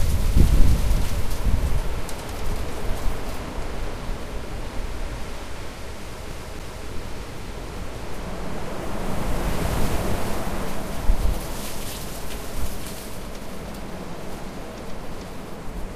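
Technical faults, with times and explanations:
6.31 to 6.87 s, CD stuck on one turn: a fragment of about 0.28 s plays twice in a row, each restart preceded by a brief mute where the pickup jumps back a track after hitting a scratch at the same point of the disc's rotation. The exact, evenly timed repeat of one fixed slice, with a silent gap at every jump, separates this from a looping network or buffer glitch, which repeats much shorter scraps without clean mutes.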